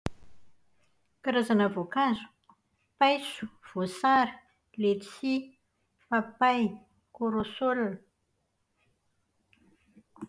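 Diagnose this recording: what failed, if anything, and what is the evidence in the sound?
Nothing in the signal chain has failed: the speech recording carries through without any audible defect at any stage.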